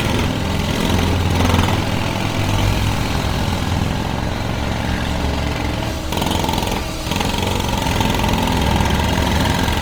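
Sounds, with Opus compression damage throughout. Textures turn grainy, rough and noisy. Top stays full, near 20.2 kHz. Likely a low-rate CELT encode, around 24 kbps.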